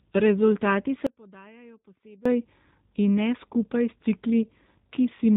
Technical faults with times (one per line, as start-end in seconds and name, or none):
0.00-5.37 G.729 codec
1.07-2.25 audio dropout to a faint residue
4.42-4.45 VoIP packet loss concealed by the speech codec